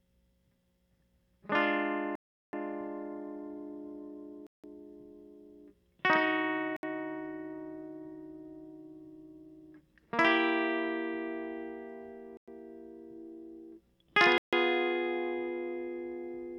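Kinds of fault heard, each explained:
Bluetooth stall: Packets to the headphones were likely held up by interference, leaving the playback buffer empty until the resent data arrived. The music cuts to complete silence five times, for between 0.07 s and 0.38 s each, then resumes.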